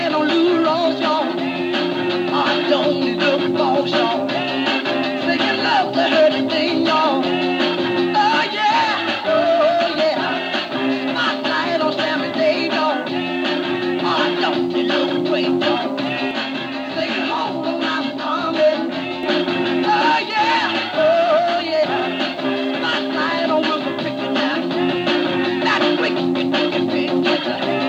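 A DECT cordless phone buzz runs through the whole clip: a nearby handset or base station's 100 Hz radio bursts are rectified by the audio circuitry, leaving a thin, steady buzz about 40 dB below the signal. A spectrogram shows a constant 100 Hz line with evenly stacked harmonics.

From 16.31 to 19.23 s, channel delay (comb filtering) appears. One channel lags by around 20 ms before the mono sum, cancelling shared content at regularly spaced frequencies from roughly 20 Hz upward. The sound turns rough and slightly doubled, and the spectrogram shows fixed, evenly spaced dark notches.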